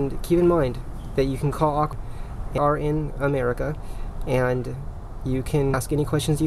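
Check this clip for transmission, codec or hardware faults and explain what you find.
Compressed frames were skipped three times, at 1.93, 2.58 and 5.74 s. Each time a run of roughly ten 92.9 ms frames never reached playback, so the sound jumps ahead by about 0.7 s.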